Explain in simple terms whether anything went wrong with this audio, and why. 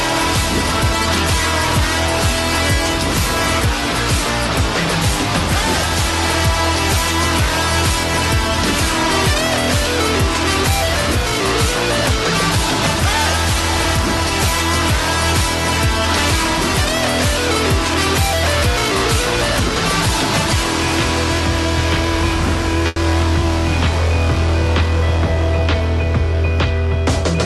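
Something did go wrong, briefly, at about 22.87 s to 22.99 s: a burst of packet loss. Several chunks of the audio stream arrived too late or not at all. For about 90 ms the receiver filled the hole by stretching the last sound it had and letting it fade, then picked up again with roughly 60 ms skipped. Unlike a plain dropout, which falls to silence, this gap is smeared over by a fading echo of the sound just before.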